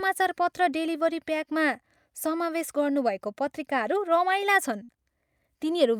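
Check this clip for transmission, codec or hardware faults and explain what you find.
One transmission fault is audible: a burst of packet loss from 4.83 to 4.94 s. The speech freezes into a held, fading buzz or hiss for 50 ms, with 40 ms of audio missing, then resumes slightly further on, skipping 14 ms. Consecutive packets went missing, so the receiver extended and faded the last sound before resuming.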